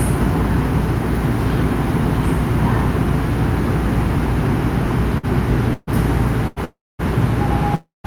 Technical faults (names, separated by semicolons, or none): short stall from a late packet; call audio freeze